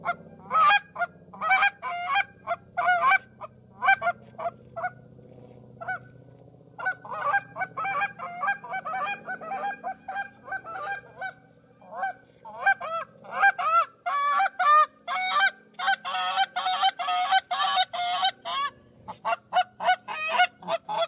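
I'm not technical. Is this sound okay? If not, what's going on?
Yes, nothing wrong turned up on listening, so there's no technical problem to flag here.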